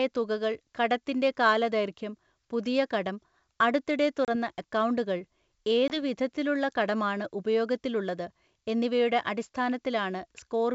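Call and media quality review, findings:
Packet loss on an ADPCM call, 4.25–4.29 s, right after "പുതിയ കടം അടുത്തിടെ". Hard-edged silent gap of about 30 ms, consistent with roughly three lost packets. The receiver's adaptive predictor and step size drift from the sender's, so speech returns briefly distorted until the adaptation re-converges.

Same fault, 5.88–5.98 s, ending just before "വിധത്തിലുള്ള കടമാണ് ഉപയോഗത്തിലുള്ളത് എന്നിവയുടെ". Dropout of about 20 ms, roughly two packets' worth, then the same decoder-state mismatch and recovery across the following tens of ms. The probable component is the G.722 ADPCM decoder state, since the 64 kbit/s band-split coding itself shows no more than faint damage.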